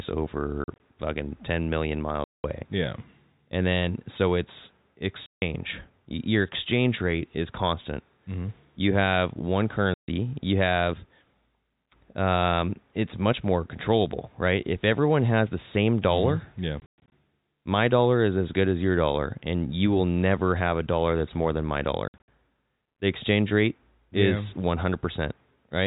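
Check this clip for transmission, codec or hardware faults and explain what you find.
The clip has one transmission fault, packet loss filled with silence, heard six times. The telephone-band G.711 coding is intact apart from its 4 kHz ceiling.

Packet loss filled with silence: the speech drops into dead gaps with hard edges at 0.64–0.80 s, 2.24–2.44 s, 5.26–5.42 s (after "then so it's"), 9.94–10.08 s (after "have one"), 16.8–17.12 s and 22.08–22.28 s (after "that's more than my"). Lost packets were replaced by silence. The gaps are multiples of 20 ms, which fits 20 ms packets. Some dropouts are scattered, such as 80 ms lost across 160 ms. Others are solid, up to 200 ms.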